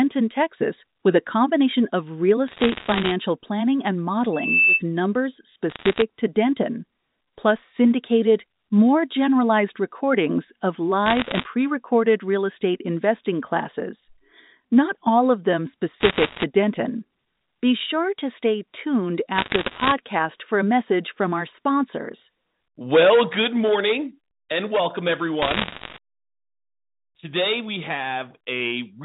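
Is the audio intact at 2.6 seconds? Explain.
No, 2.6 s sits inside a burst of bit errors on a digital phone line (2.48 to 3.12 s): flipped bits corrupt single samples, giving sharp ticks and crackle over the speech.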